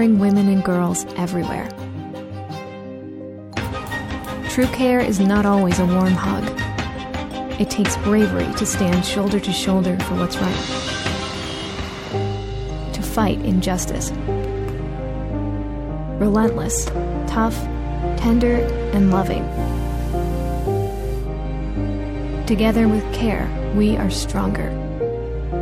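From 19.46 to 21.29 s the radio is blending from digital to analogue FM: a 126 ms cross-fade brings up hiss roughly 30 dB down and shifts level by about 1 dB. Steady hiss, not warbling artefacts, separates it from codec loss.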